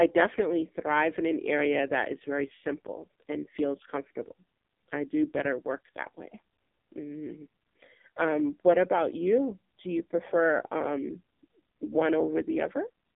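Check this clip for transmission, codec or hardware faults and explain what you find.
One fault runs through the whole clip: the speech has passed through the AMR narrowband mobile codec. Throughout, the audio is confined to roughly 200 Hz to 3.6 kHz with nothing above 3.7 kHz. Heavy damage gives a buzzy, synthetic texture, consistent with AMR-NB at a low rate around 5.9 kbps. The codec rebuilds each 20 ms frame from a vocal-tract model and sparse pulses. That modelled, buzzy quality is what sets it apart from a plain band-limited telephone line.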